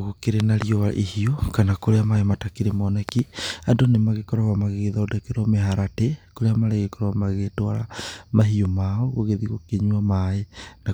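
Loud pops hit this speech recording at 0.40–0.64 s and again at 3.09–3.21 s, each a quick double pop standing well above the voice, the first roughly 15 dB over it. Likely a sudden voltage step from a plug, switch or static discharge.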